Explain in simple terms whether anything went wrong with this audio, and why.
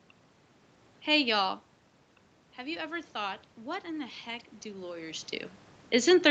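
From about 2.56 s to 5.34 s the voice and the room noise behind it slowly swell louder together, as if someone were turning up a volume knob. That is automatic gain rising: the call's level control noticed the incoming sound had become much quieter, after the talker moved away from the microphone, and gradually raised its boost to compensate. Because it boosts everything, the background noise climbs along with the voice.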